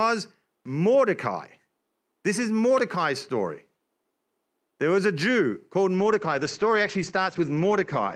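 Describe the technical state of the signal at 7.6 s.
At 7.6 s the signal is inside a call bitrate drop. It begins at 5.97 s and lasts to the end of the clip. The connection's bandwidth estimate fell, so the encoder was told to spend far fewer bits. The sound points to a fall from about 64 kbps to about 13 kbps, held at its lowest for 1.92 s. Coding turns coarse. The top end is cut from 20 kHz to 8 kHz. The speech sounds muffled and rough.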